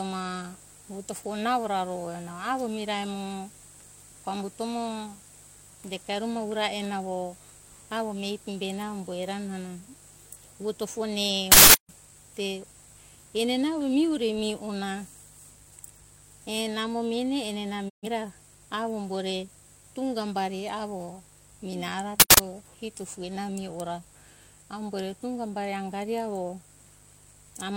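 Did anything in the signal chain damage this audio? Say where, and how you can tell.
Yes. A steady, raspy mains buzz runs under the speech for the whole clip, about 30 dB below it. This is damage in the analogue wiring: switching spikes at twice the 50 Hz mains rate leak in through a dimmer, rectifier or missing shield, spreading harmonics upward.

Two short, loud bursts of digital noise cut in, from 11.52 to 11.89 s and from 22.20 to 22.38 s. This is an uninitialised buffer at the driver or buffer stage. Leftover memory was played as samples, and the 0.37 s and 0.19 s lengths fit whole 16384- and 8192-sample blocks.

At 17.88 s the sound fades to silence over about 20 ms and returns at 18.08 s. This is a digital broadcast dropout in the network or reception stage. The receiver muted on lost or corrupt frames, and the roughly 128 ms gap fits three lost frames.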